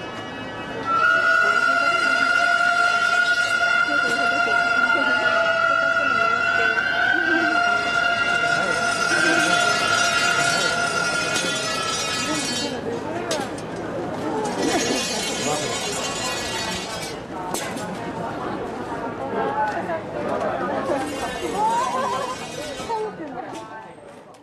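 From 9.11 to 14.95 s a doubled audio track appears: a second, full-band copy of the sound runs about two seconds behind at roughly equal level, with no decay or room colour, and starts and stops abruptly, likely from a slower second capture path.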